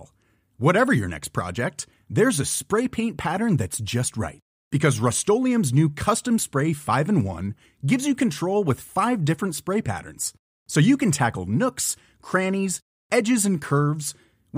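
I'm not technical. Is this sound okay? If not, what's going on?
Yes, it sounds fine.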